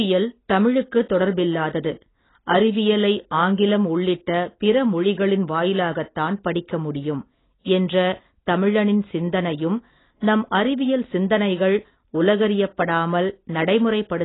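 From start to finish the speech sits under a heavy layer of AAC compression, most likely AAC-LC squeezed down to a very low bitrate, something on the order of 16 kbps. There's essentially nothing above 3.9 kHz, so the whole thing comes across dull, and sibilants turn fizzy and smeared. That's the encoder dropping its bandwidth and coarsely quantising what's left to stay within budget, which leaves a watery, warbling texture on sustained sounds.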